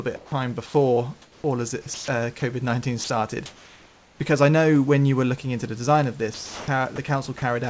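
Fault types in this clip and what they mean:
Sound dropped by the voice detector: speech fragments up to 240 ms long, likely mistaken for background, become flat noise, showing as a collapsed waveform envelope and vanished spectrogram harmonics.
Comfort noise in place of the background: in pauses, likely from discontinuous transmission, room noise turns into steady hiss about 1 dB quieter, a smooth, textureless spectrogram band.
Sound chopped by the voice detector: after "all of", the detector likely toggled repeatedly, so speech flickers with noise, giving a gated waveform and striped spectrogram.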